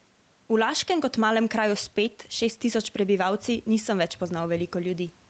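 Gain pumping runs through the whole speech clip. The gain swings by roughly 5 dB, squashing the level, likely from input gain set far too high with a fast limiter clamping down on every peak.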